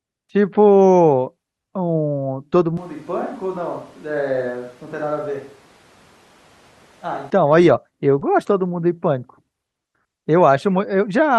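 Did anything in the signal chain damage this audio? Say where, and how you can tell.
Yes. Switch to a distant microphone, from 2.77 s to 7.30 s, at the capture stage. At 2.77 s the speech abruptly turns roomy and hollow, loses bass and drops about 10 dB, with room noise rising to roughly 25 dB below the speech. At 7.30 s the close, full sound snaps back. That sudden change in both directions likely means the close microphone's feed dropped out and a far-off pickup, such as a camera microphone, carried the recording.

Short concealed packet loss, from 8.19 s to 8.23 s, in the network and codec stage. A brief smear is audible there. Some of the audio never reached the decoder in time, so the receiver extended the preceding sound to cover the 20 ms gap and then cross-faded back into real audio. The missing 20 ms was filled this way, which gives a short wobbly patch rather than a clean continuation.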